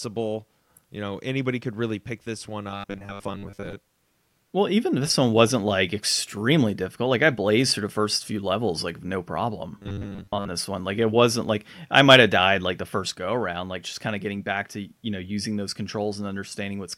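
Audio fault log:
2.70–3.77 s and 9.78–10.48 s, robotic sound from repeated short buffers: after "really pick this one" and again just before "this one", speech turns into a stiff metallic 100 Hz buzz. Audio likely arrived too slowly, so a 10 ms chunk kept looping while most real audio got skipped.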